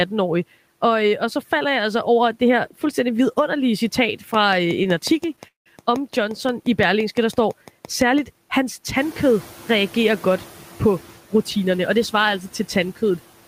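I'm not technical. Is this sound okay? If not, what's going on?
No. Right after "her fuldstændig vidunderlige citat", from 4.34 to 8.19 s, a train of clicks runs through the speech: about six evenly spaced ticks a second, roughly twenty in all. Something is injecting a sharp pulse again and again, likely interference from nearby equipment or a faulty connection or power supply.

At 4.83 s there is a short stall from a late packet. A piece of audio arrived late, so the receiver stretched the last sound for about 15 milliseconds until it came. Nothing is lost, but one sound is held a touch too long.

From 5.47 to 5.68 s there is a call audio freeze, likely because packets were held up on the way. The last sound was stretched briefly, then went quiet for about 150 milliseconds before the speech carried on from where it stopped, leaving a gap.

Around 9.0 s the room's background noise gets louder, which is the room itself. 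The noise suppressor is catching up: it lets the new noise through at first, and takes until about 11.05 s, roughly two seconds, to turn it back down.

From 11.35 to 13.11 s there is a jitter buffer speed-up. Too much audio had built up waiting, so the receiver cut out tiny slivers, about a tenth of a second in total. The speech runs about 5% fast at the same pitch and sounds slightly hurried.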